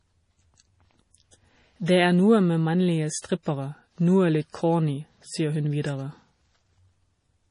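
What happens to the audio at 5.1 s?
At 5.1 s the speech carries the same heavy MP3 compression heard throughout, likely from a low-bitrate encode around 32 kbps. Starved of bits, the encoder cuts the treble and toggles weak frequency lines, giving a watery, swirly sound. A spectrogram shows a hard ceiling with flickering holes beneath.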